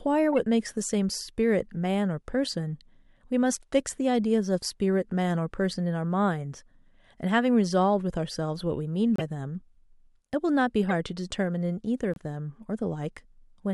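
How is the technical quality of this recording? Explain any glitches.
The recording has four short decoding glitches. Each is a corrupt frame decoded: bits inside a compressed frame were damaged, and the decoder played that frame anyway. Misread gains and codes put energy at the wrong frequencies for a couple of frames at a time. The glitches fall at 0.32–0.34 s, 9.16–9.21 s, 10.89–10.94 s and 12.14–12.20 s. Each one is a brief chirp or burst of noise over the speech. The one at 9.16 s is the loudest, and the one at 12.14 s is the faintest.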